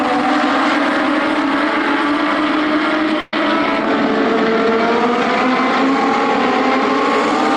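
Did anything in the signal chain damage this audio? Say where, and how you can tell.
Yes. Burst of packet loss at 3.20 to 3.33 s, on the network path: the receiver held and faded the last sound for 120 ms, losing that audio.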